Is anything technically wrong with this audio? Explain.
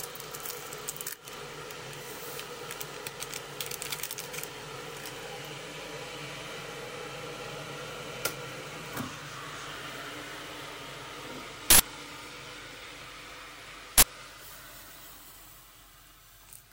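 Yes, two uninitialised buffer faults occur. At 11.70–11.80 s (about 93 ms, which fits a 4096-sample buffer) and 13.98–14.03 s (about 46 ms, fitting a 2048-sample buffer), stale memory plays as samples, giving loud digital noise bursts. They appear as abrupt waveform blocks and broadband vertical spectrogram bands.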